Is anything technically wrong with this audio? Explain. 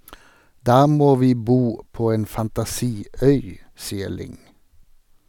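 No, nothing is technically wrong with this audio.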